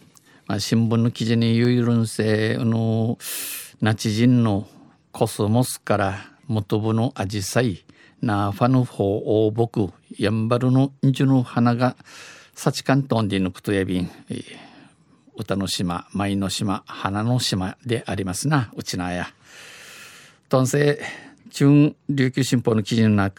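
From 1.65 s to 22.41 s, a click recurs every 2.31 s, about ten times. These are clock drift buffer slips. Two clocks likely disagree by around 70 ppm. The buffer overflows or runs dry, and a few samples are dropped or repeated each time.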